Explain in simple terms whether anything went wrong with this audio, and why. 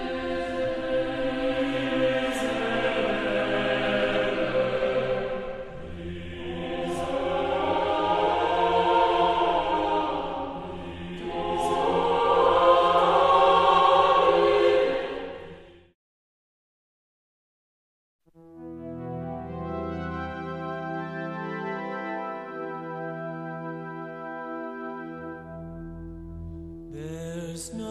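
Nothing went wrong here.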